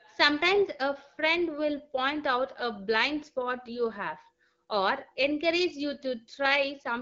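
No technical faults can be heard in this recording.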